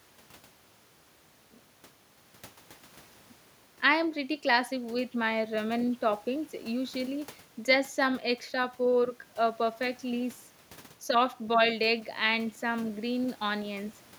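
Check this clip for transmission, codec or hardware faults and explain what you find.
Listening through the speech, I hear no transmission, codec or hardware faults.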